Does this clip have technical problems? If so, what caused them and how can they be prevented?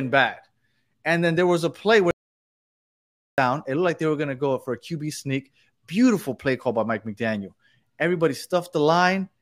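Yes. An audio dropout to silence runs from 2.11 to 3.38 s: the speech cuts off mid-flow and about 1.27 s of silence follows, with no room tone, most likely because the input link or device briefly failed while recording continued. Secure cables and connections, and monitor input levels while recording.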